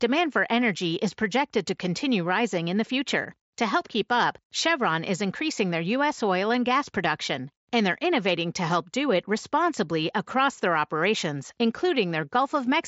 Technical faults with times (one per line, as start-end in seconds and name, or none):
none